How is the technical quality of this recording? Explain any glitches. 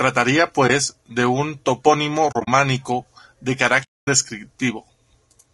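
The recording has two problems: a grainy, coded texture throughout the speech, and three soft dropouts where the sound briefly goes missing.

Low-delay AAC compression: The whole clip has a rough, grainy edge, with noise filling the gaps between the voice's harmonics and a synthetic top end. That's likely low-delay AAC, the AAC-ELD flavour used for video calls. Its short frames can't pin down pitch harmonics finely and burn bits doing it, so at a modest rate (this sounds like around 32 kbps) the damage is plainly audible.

AAC frame loss with muting: There are three holes. The first is at 0.67 to 0.70 s, just before "de un topónimo", and sounds like a single frame of about 20 ms going missing. The second is spread over 2.31 to 2.48 s, right after "de un topónimo", with about 100 ms lost in scattered chunks, the longest stretch around 40 ms. The third is at 3.83 to 4.08 s, a solid 240 ms gap. 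In each case the decoder zeroed the lost spectrum, and the overlapping windows fade the sound out and back in, so the gaps have soft edges.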